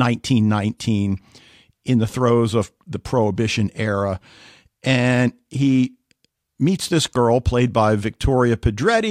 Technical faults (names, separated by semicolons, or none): none